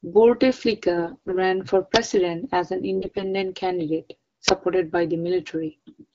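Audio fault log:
0.97 to 1.52 s and 2.95 to 3.24 s, AMR bit errors: On a weak link, the less protected bits of the AMR-WB speech frames arrived flipped at a rate of roughly seven percent, while the check on the important bits still passed. The second burst follows "as an". The excitation pulses land in the wrong positions, and the fine pitch, gain and spectral values drift. The speech keeps its rough pitch and loudness but turns hoarse, scratchy and gargly for those stretches.
1.96 s and 4.48 s, uninitialised buffer: A playback block was sent out before any audio had been written into it, so stale memory contents were played as samples. The block was about 5 ms at 1.96 s, just before "as an", and about 10 ms at 4.48 s, just before "by the". Each one is a loud crack or short burst of digital noise that cuts abruptly into the speech.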